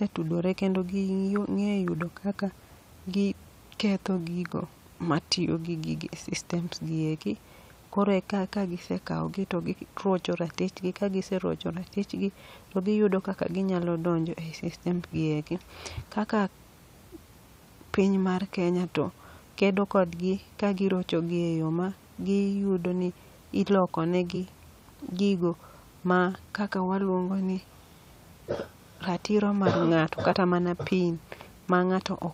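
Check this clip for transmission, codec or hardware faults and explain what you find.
The clip has three brief glitches from damaged data in a compressed stream. The first is at 4.66 s, between "gi ketho gigo" and "matiyo gi gigi e", the second is at 24.35 s, and the third runs from 30.31 to 30.34 s. Each is a short blip caused by corrupted bytes, which the decoder misreads before it loses sync and hunts for the next frame.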